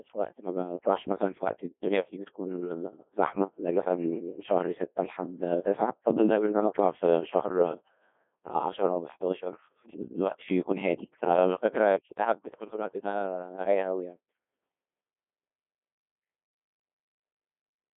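From start to finish, the speech passes through a Codec 2 vocoder at a very low rate, consistent with roughly 1.2 kbit/s. Only pitch, voicing, energy and envelope survive, then sine waves rebuild the voice, which sounds heavily robotic and buzzy, band-limited to 200 Hz to 3.5 kHz, with nothing above 3.8 kHz.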